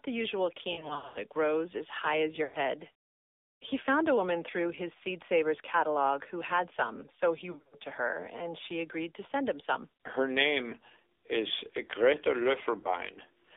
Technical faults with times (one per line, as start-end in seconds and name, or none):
0.00-13.56 AMR narrowband mobile codec
0.72-1.23 lost AMR speech frames
2.44-2.57 lost AMR speech frames
7.52-7.75 lost AMR speech frames
10.70-10.75 lost AMR speech frames
12.80-12.91 lost AMR speech frames